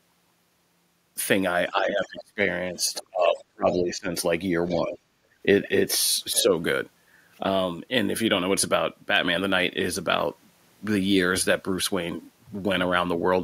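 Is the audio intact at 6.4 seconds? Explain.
No. From 6.33 to 6.42 s there is other side's voice leaking through: a second voice sits roughly 15 dB under the main speech, likely residual loudspeaker echo that the echo canceller failed to remove from the microphone signal before transmission.

Overlapping it, from 6.33 to 6.49 s, is speech suppressed in double talk. The speech level dips by up to roughly 10 dB, affecting about 100 ms in total. The likely cause is the echo canceller, unable to separate the near talker from loudspeaker echo while both sides were active, attenuating the whole signal.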